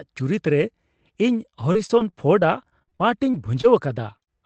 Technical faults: repeated packet loss (robotic sound)

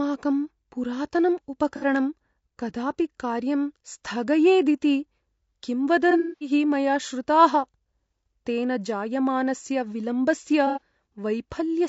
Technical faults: low-delay AAC compression; AAC frame loss with concealment

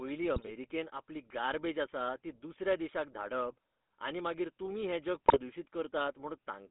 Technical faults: GSM full-rate codec; GSM bit errors

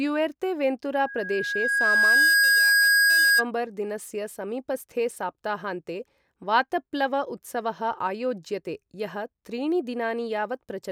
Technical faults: loudspeaker feedback squeal

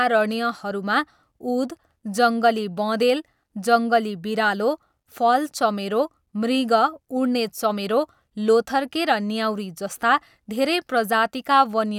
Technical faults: none

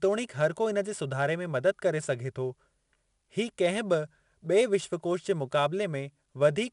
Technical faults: 4-bit ADPCM compression

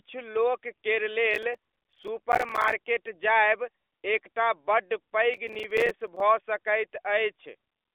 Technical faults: processor overload crackle

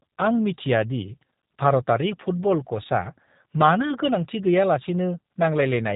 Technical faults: G.729 codec

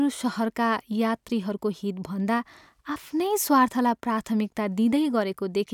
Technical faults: none

